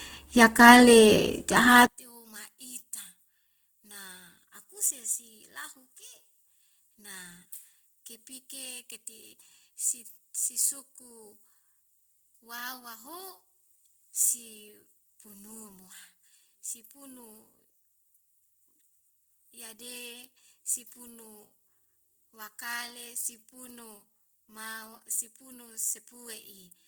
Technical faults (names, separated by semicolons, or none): Opus compression; one channel inverted